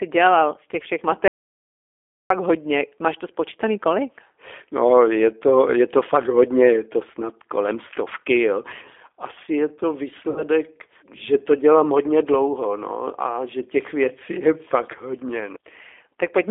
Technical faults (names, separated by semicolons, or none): G.729 codec; audio dropout to silence; VoIP packet loss concealed by the speech codec